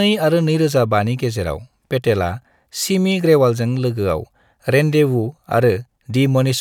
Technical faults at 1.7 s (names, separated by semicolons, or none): none